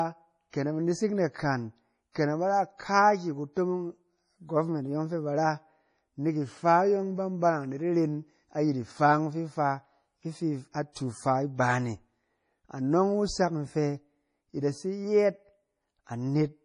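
The whole clip carries heavy MP3 compression damage. The speech sounds watery and swirly, and sibilants chirp metallically. Nothing sounds above 10.5 kHz. This is likely from an encoder starved of bits, which fits a 32 kbps encode. It cut the treble and dropped weak frequency detail from frame to frame.

From 2.12 to 2.15 s there is pre-echo. A short hiss arrives about 33 ms ahead of a sharp attack. The codec spread noise meant for the loud onset across its whole block. That noise leaked into the quiet gap before it and softened the attack.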